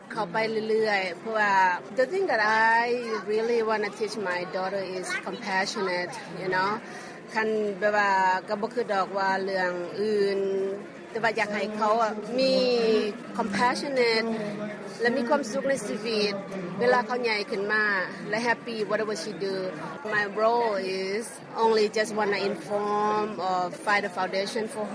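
No technical faults are audible.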